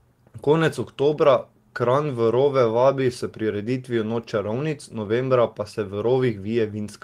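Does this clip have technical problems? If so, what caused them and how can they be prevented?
No, there are no technical problems to prevent here.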